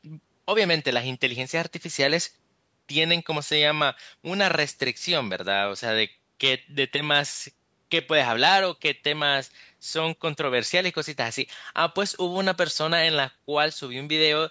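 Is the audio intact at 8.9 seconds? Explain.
Yes, the speech at 8.9 seconds is intact, with no dropout, distortion or other fault at that moment.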